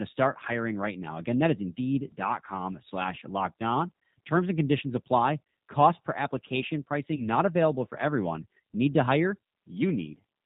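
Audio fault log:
Throughout: G.729 codec. The whole clip has been squeezed through this 8 kbit/s VoIP coder, and the damage is plainly audible. Nothing above 4 kHz survives, so the speech sounds boxed-in and dull, with a slightly rough, synthetic edge. That comes from the decoder rebuilding each 10 ms frame out of a vocal tract filter, a pitch predictor and a handful of pulses, rather than carrying the actual waveform.
7.16 to 7.24 s: VoIP packet loss concealed by the speech codec. About 20 ms of audio went missing here, which fits a single lost packet. The decoder covered the gap by carrying its last pitch and filter forward at falling gain, so you hear a brief stretched, fading sound instead of a clean dropout. Because each frame builds on the one before, the speech stays weak or distorted until around 7.24 s, well after the gap itself.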